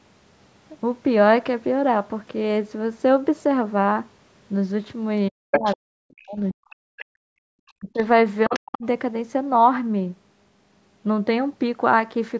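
From 5.3 to 6.78 s the talker's voice drops away in pieces, deeply and for about a second in total, while a second voice comes through at roughly equal loudness from 5.52 to 5.75 s. This is speech suppressed in double talk, likely the echo canceller ducking both sides during overlap. Unlike gating, it is the talker's own voice that thins and vanishes.

The other side's voice leaking through recurs at 6.97 to 7.05 s, well below the speech, then faintly from 7.68 to 8.03 s and moderately from 8.44 to 8.78 s. It is a separate voice, not a dip in the talker's voice, and is likely uncancelled loudspeaker echo.

From 7.06 to 7.46 s the room background drops by about 40 dB and then returns. This is background gated by the echo canceller. Only the ambience vanishes here, with no speech affected.

The talker's voice is suppressed again at 7.74 to 7.97 s and 8.48 to 8.84 s, each time overlapping the leaked voice.

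Throughout, the call microphone processing leaves nothing above 8 kHz, which is normal.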